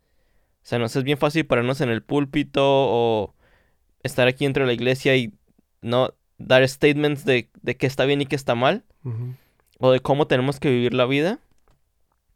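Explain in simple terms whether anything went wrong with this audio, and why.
Nothing went wrong with this speech recording: the signal holds steady all the way through, with no technical problem to be heard at any point.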